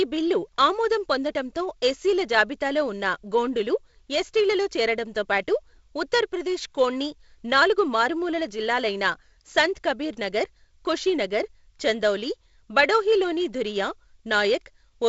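No faults in this speech; the wideband telephone path runs at 48 kbit/s G.722, so the band stops near 7.7 kHz, with the light hiss and slight lower-band graininess expected at that rate.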